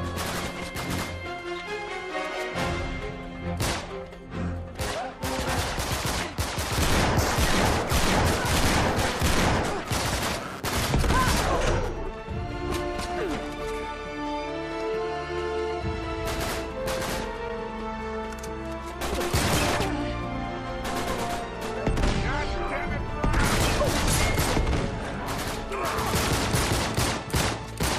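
From 8.47 to 11.89 s a buzzing, chirping rasp pulsing at around 150 Hz sits roughly 15 dB below the sound. This is computer activity noise: processor, graphics or mouse load swings disturbed the audio circuit's shared ground, so the noise follows the machine, not the audio.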